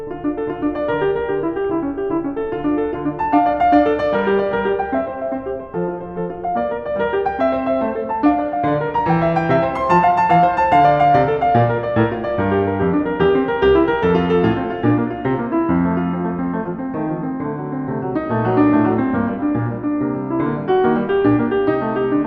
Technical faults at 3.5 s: MP2 compression

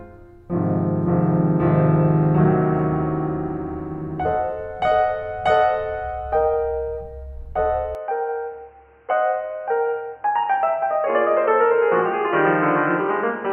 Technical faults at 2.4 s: none

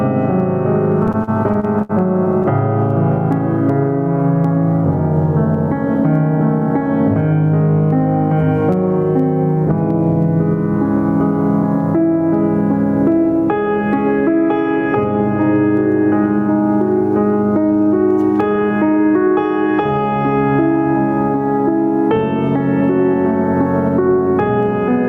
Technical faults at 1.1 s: gain pumping; repeated stalls (stutter)

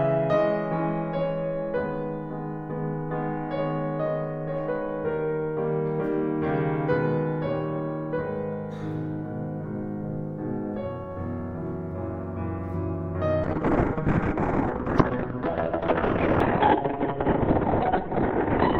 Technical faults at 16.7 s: call bitrate drop

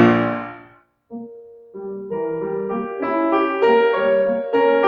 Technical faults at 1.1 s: noise suppressor applied to music or sounds; sound cut by the noise suppressor

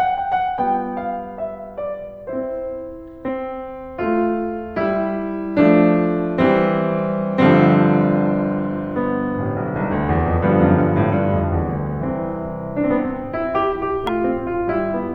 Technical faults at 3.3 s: damaged data in a compressed stream

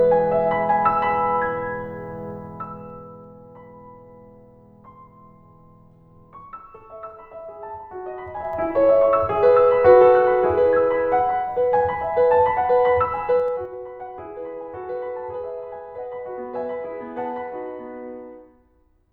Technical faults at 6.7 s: none

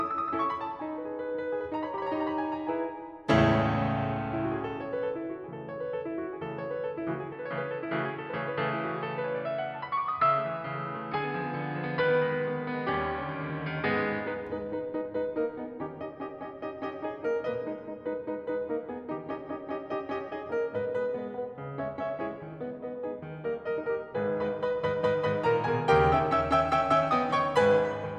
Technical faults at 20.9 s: none

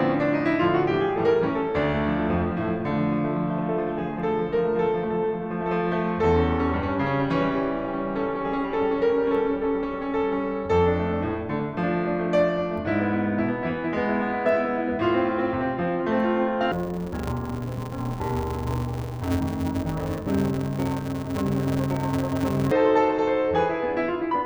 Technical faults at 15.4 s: none

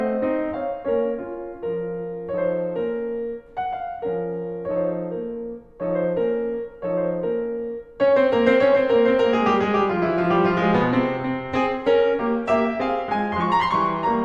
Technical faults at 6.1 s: none

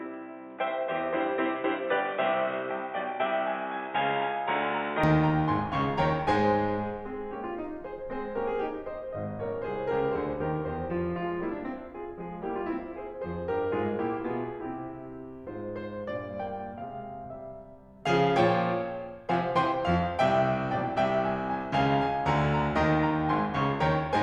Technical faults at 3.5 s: input switched to a poorer device

